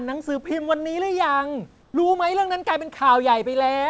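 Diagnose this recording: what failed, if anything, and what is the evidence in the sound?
Between 1.82 and 1.94 s, a 120 ms stretch of the background is replaced by steady, featureless noise about 3 dB quieter than the surrounding room noise, which sits roughly 38 dB below the loudest speech. This is comfort noise in place of the background, likely from discontinuous transmission in the call processing: the sender stopped sending during the pause and the receiver synthesised shaped noise. Unlike a noise gate or dropout, the gap never falls to silence. Its texture simply goes flat, and the band still ends near 8 kHz, as on a G.722 call path.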